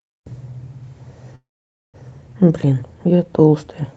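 At 1.35 s the speech stalls until 1.96 s. A short fading tail of the last sound gives way to about half a second of silence, then it resumes exactly where it stopped. That's a call audio freeze, likely delayed packets draining the jitter buffer, so everything after it lands 0.58 s late.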